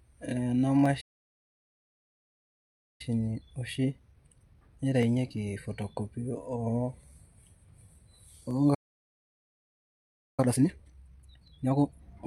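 From 0.86 s to the end, a click recurs every 1.19 s. These are clock drift buffer slips, likely from two clocks a few hundred ppm apart, each slip dropping or repeating a handful of samples.

At 1.00 s the sound stops for 1.99 s, a playback stall likely caused by data starvation or a blocked thread. It resumes at 3.01 s. Time-compressed catch-up runs at 1.1 times speed until 6.01 s, hurried but at normal pitch.

At 8.74 s a second stall silences the sound for 1.64 s. From 10.40 s to 12.02 s, catch-up runs at 2.0 times speed, sounding sharply rushed.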